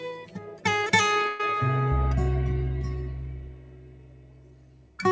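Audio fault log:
throughout: noise suppressor applied to music or sounds. Level swings by about 10 dB as held sound is pulled down; a speech-tuned suppressor treats steady content as noise.
0.21–0.65 s: sound cut by the noise suppressor. Sound sinks by up to about 10 dB over roughly 0.4 s, mistaken for noise and turned down.
1.28–1.40 s: call audio freeze. The sound stalls into a fading buzz or hiss for 115 ms, then resumes with nothing lost, likely a jitter buffer running empty while packets were delayed.
3.35–4.98 s: sound cut by the noise suppressor. Over roughly 1.5 s the sound sags by up to about 11 dB, its sustain and decay suppressed as noise, heard through a G.722 call path with nothing above 8 kHz.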